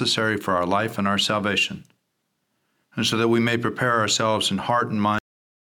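At 5.19 s the speech stops mid-sound. This is a cut-off end. The final buffers were never written out, so nothing reached playback. There is no natural decay. The signal drops straight to digital silence, which holds for the last 0.42 s.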